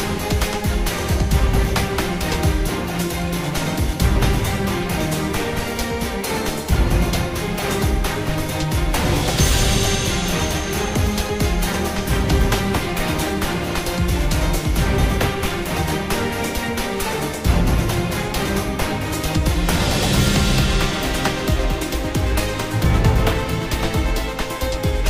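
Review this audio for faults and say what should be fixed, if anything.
Repeated buffer at 7.6 s: the device replayed one 5 ms chunk three extra times when new audio arrived late, giving a brief buzz rather than lost sound. Prevent it with a larger playback buffer or higher-priority audio thread so data always arrives in time.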